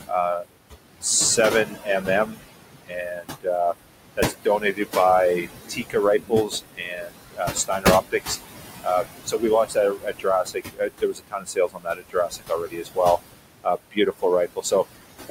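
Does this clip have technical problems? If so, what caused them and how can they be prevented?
Yes. Noise suppressor artifacts run through the whole clip. The background sinks by about 20 dB between phrases and swells back under the speech. The suppressor attenuates whatever bands it judges to be steady noise, frame by frame, and the room noise sits only about 8 dB below the speech, so it works hard throughout. A quieter room or a milder suppression setting would prevent this.

Speech cut by the noise suppressor makes parts of words sound swallowed or faint at 0.07–0.57, 1.65–2.40, 2.87–3.47, 4.17–4.96, 5.43–8.38, 8.84–12.99 and 13.64–14.24 s. The drops reach about 13 to 22 dB, and roughly two seconds are lost within 8.84–12.99 s alone. Quiet speech close to the noise level is being classed as noise and turned down with it. Raising the speech level at the microphone or reducing suppression strength would prevent it.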